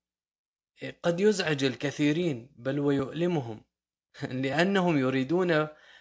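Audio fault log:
No fault is heard in this speech clip.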